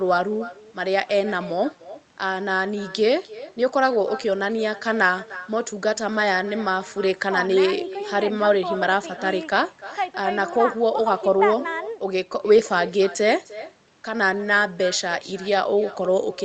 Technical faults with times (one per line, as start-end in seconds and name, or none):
0.00-16.44 echo with no canceller